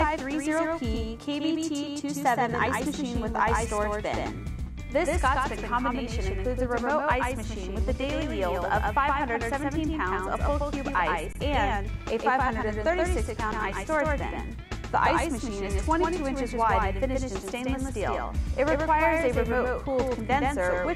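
Throughout the clip a doubled audio track is heard: a second full-band copy trails by roughly 150 ms at about 5 dB below the original, most likely from a second capture path or a misaligned edit. Unlike an echo or reverb, it has no decay and no room colour.

At 11.33 to 11.35 s, and again briefly at 13.52 s, an underrun with held sample occurs. The output buffer empties and the converter holds its last value, so the waveform freezes flat for about 24 ms and then 7 ms. Unlike a dropout to silence, it holds the last level, and because playback resumes where it stopped, it ends softly.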